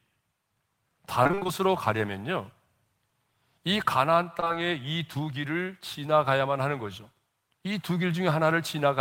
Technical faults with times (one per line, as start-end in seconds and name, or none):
1.23-1.50 repeated packet loss (robotic sound)
4.40-4.51 short concealed packet loss